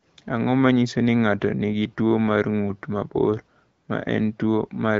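Speech, with no technical fault to report. It has passed through the AMR wideband (HD Voice) codec at 12.65 kbit/s, which leaves it clear with only light coding texture, and the top of the band above 6.4 kHz is the codec's shaped noise fill rather than the original detail.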